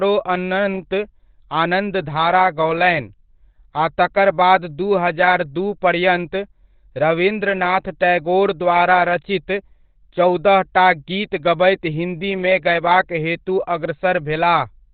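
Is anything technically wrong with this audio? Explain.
Yes. Throughout, heavy Opus compression likely switched the encoder to its narrowband SILK speech mode at a low bitrate, around 12 kbps, cutting everything above 4.5 kHz, so the speech sounds muffled and hoarse.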